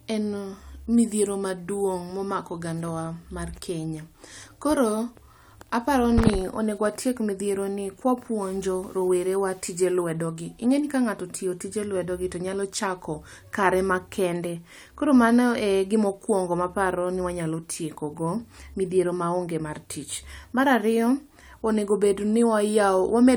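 A stretch of speech from 8.42 to 9.92 s was likely requantised to a low bit depth without dither, with each sample simply rounded to the nearest available step. The resulting grit sits only around 35 dB below the signal, which fits something near 8 bits. Because the rounding error tracks the waveform instead of forming a steady hiss, the softer parts of the speech turn grainy and rough, and the distortion shifts with every change in level.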